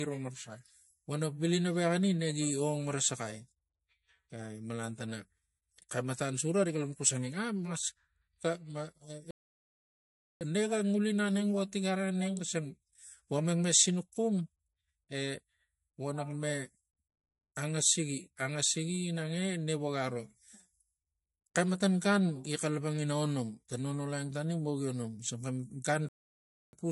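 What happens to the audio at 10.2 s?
A playback stall, likely from the player running out of data, silences the speech from 9.31 to 10.41 s, about 1.1 s, before it resumes. Throughout, MP3 compression likely starved of bits, fitting a bitrate near 49 kbps, leaves a watery, swirly texture.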